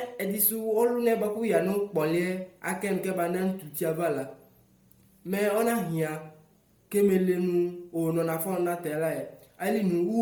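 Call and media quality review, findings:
Speech, whole clip. Breathy, grainy edge across the upper band. Likely Bluetooth LC3 compression. Transform codec zeroes high bands and refills them with noise. Heavy damage, fits roughly 32 kbps with 10 ms frames. Bandwidth still reaches 20.1 kHz.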